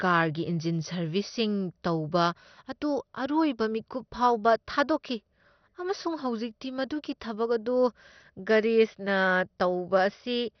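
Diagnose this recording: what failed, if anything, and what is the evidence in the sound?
MP2 compression, present throughout the speech, is the fault, and the stage is the codec. Nothing reaches above about 6.2 kHz, so the speech sounds dull, and what remains carries a heavy gurgling, granular roughness. This is likely MPEG Layer II coding starved of bits, which fits a rate near 48 kbps. The encoder switched off its upper sub-bands entirely and quantised the surviving bands so coarsely that the residue turned grainy.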